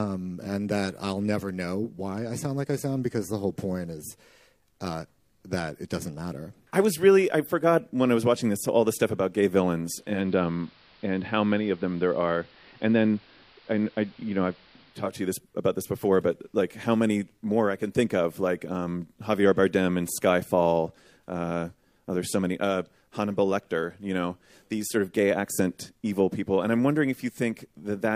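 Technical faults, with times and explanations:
9.84 to 15.26 s: digital radio blending to analogue. The receiver lost its digital signal and cross-faded to the station's AM broadcast, then faded back. Each blend takes about half a second. While on AM, the treble narrows to the limited bandwidth of that service. A hiss appears, around 30 dB under the programme. The overall level stays the same across both changeovers, so the switch is heard as a change in tone and noise.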